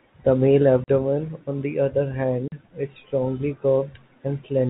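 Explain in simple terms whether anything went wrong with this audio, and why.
Twice the speech drops out completely: at 0.84 s and again at 2.48 s, each gap lasting 40 ms. This is packet loss filled with silence, which fits two consecutive 20 ms packets missing each time, replaced by nothing. The telephone-band sound of the G.711 coding is normal for a phone line.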